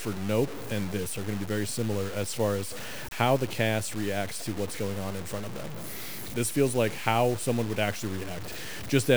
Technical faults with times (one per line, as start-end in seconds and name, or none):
0.00-9.17 low bit depth without dither